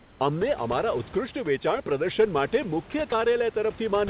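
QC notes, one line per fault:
0.00–0.20 s, comfort noise in place of the background: The opening 200 ms of background is smooth, steady hiss without texture. It sits about 4 dB quieter than the room noise that follows. That room noise is about 24 dB below the speech. The likely cause is discontinuous transmission. The sender sent no audio during this quiet start, only an occasional update. The receiver then made up noise roughly matched to the background. The real detail is gone, so it sounds flat and slightly dipped.
1.01 s onward, every 1.1 s to the end, clock drift buffer slips: A click recurs at a steady 1.1 s rhythm while the speech runs. The regular spacing is what gives it away. The likely cause is two devices running on separate clocks, mismatched by about 150 ppm. The buffer between them slowly drifts until a handful of samples is dropped or repeated. Each slip breaks the waveform and is heard as a tick.
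2.92 s and 3.10 s, sound dropped by the voice detector: At each time, 20 ms of sound briefly gives way to steady noise, then returns. The likely cause is the sender's voice detector judging the sound as background and pausing transmission. Generated noise filled each slot. The call codec's band limit, with nothing above 4 kHz, keeps both the speech and the fill dull-toned.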